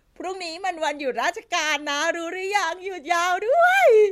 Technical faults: block size mismatch (truncated)

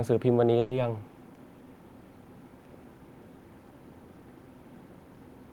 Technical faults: burst of packet loss

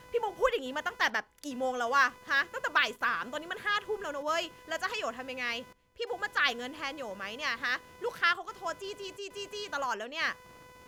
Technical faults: computer activity noise

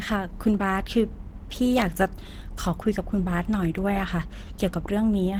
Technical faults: Opus compression

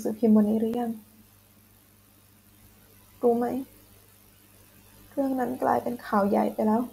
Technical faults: block of digital silence

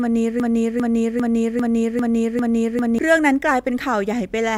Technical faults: broken-record loop

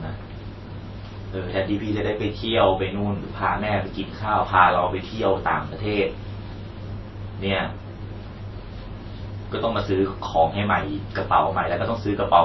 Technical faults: transcoding between lossy codecs

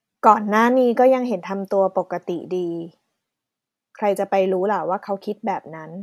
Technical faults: none

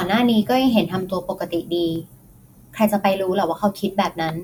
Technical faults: dropped samples

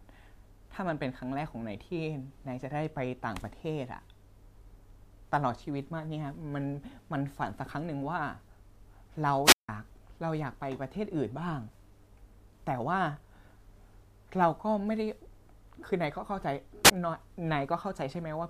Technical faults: wireless microphone squelch dropout

